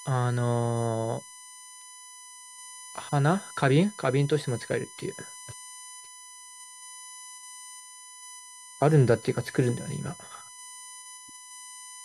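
USB whine runs under the speech for the whole clip: a fixed-pitch tone on a 1 kHz series, strongest at 9 kHz, roughly 20 dB below the speech. It comes from the bus's 1 ms frame timing, not mains hum's far lower harmonics.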